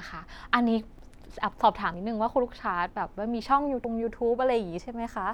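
Audio missing between chunks at 0.99, 1.94, 3.84 and 4.80 s: the speech jumps forward abruptly at each point, with roughly a twentieth of a second gone and the two sides butted together with no gap of silence. The skips recur about once a second, missing one beat between 1.94 and 3.84 s. This is likely a recorder or processor handling the audio in one-second chunks and dropping a short slice each time it closes one block and starts the next.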